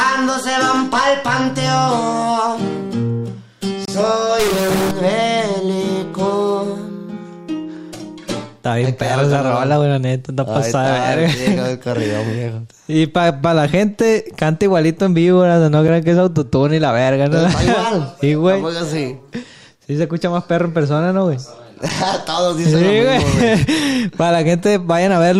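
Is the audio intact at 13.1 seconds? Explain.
Yes, the audio is intact at 13.1 seconds, with no dropout, click, distortion or other fault at that moment.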